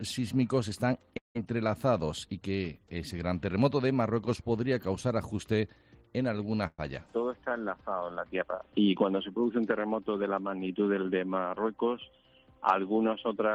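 At 1.17 s the sound stops moving forward. The last sound is stretched into a fading buzz or hiss, then silence holds until 1.37 s. About 180 ms of audio is skipped. This is likely a long network dropout, where incoming audio stopped arriving.

At 6.67 s a burst of packet loss cuts out about 120 ms. The receiver holds the last sound for roughly 110 ms and fades it. A short silence follows. Playback resumes at 6.80 s, with the lost part simply gone.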